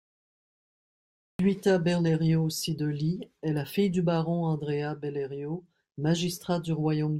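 Capture of this speech recording began late: the stream was already running before recording engaged, so the first 1.39 s hold only digital silence, and the audio then switches on abruptly at 1.39 s in the middle of a sound. This is a cut-off start. The speech enters at full level with no natural attack or fade-in, because the opening of whatever was being said never reached the recording.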